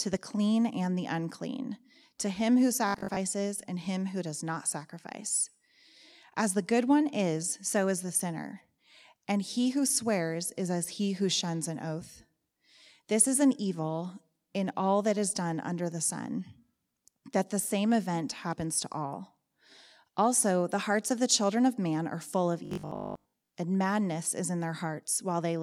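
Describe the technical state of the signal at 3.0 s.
Robotic sound from repeated short buffers runs from 2.89 to 3.23 s, after "unclean to him who": a rigid 50 Hz metallic buzz, likely from roughly half the audio being replaced by a repeated 20 ms buffer. The fixed pitch, not gaps or clicks, sets it apart from plain dropouts.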